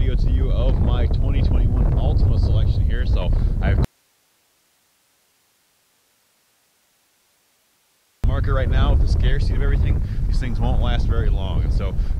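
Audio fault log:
3.85–8.24 s, audio dropout to a faint residue: signal cuts abruptly for 4.39 s leaving only hiss, roughly 45 dB down, likely from a lost link; waveform flatlines, spectrogram shows faint broadband noise.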